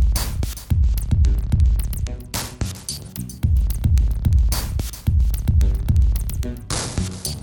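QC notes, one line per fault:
0.71–3.09 s, Bluetooth SBC bit pool drop: the music's treble dulls and a gritty noise rises, which fits the link cutting the SBC bit pool from about 31 to 12, near 88 kbps. With so few bits, the top sub-bands get little or nothing and the lower ones are coarsely quantised.
6.77 s to the end, Bluetooth SBC bit pool drop: the same dull, gritty sound returns, pointing to the same low bit pool and the same loss of top sub-bands.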